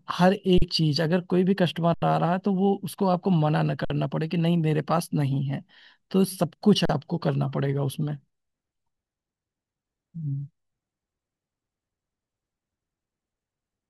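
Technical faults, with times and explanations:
0.58–0.62 s, 1.94–2.02 s, 3.85–3.90 s, 6.85–6.89 s: underrun with held sample. The output buffer ran dry for 40 to 80 ms, so the waveform freezes flat at its last value, with little or no click at the stop. No audio is lost, so each pause resumes exactly where it left off, only softly.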